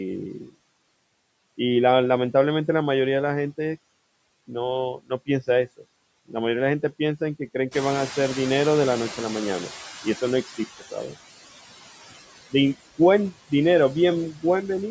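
Speech recorded through a call's microphone path, with a noise suppressor at work throughout and leaving noise suppressor artifacts. The background is pulled down by about 20 dB frame by frame, so the residual noise dips in the gaps and swells back under the talker. The suppressor also causes speech cut by the noise suppressor in three places. From 4.95 to 5.29 s, quiet speech energy is treated as noise and pushed down by up to about 21 dB, with roughly a sixth of a second actually swallowed. At 5.67 to 5.85 s it happens again, about 19 dB deep over around a tenth of a second. At 10.79 to 11.16 s the drop reaches about 15 dB across roughly a fifth of a second, so soft sounds there come out faint. The third fault is the noise suppressor catching up. The room noise steps up by about 14 dB near 7.5 s, and from 7.71 s the suppressor's noise estimate lags behind it. The louder background passes through with only about 15 dB of reduction and sinks gradually as the estimate adapts over 3.3 s, until about 11.01 s. 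Nothing is present above 8 kHz, which is the call microphone processing's normal band limit.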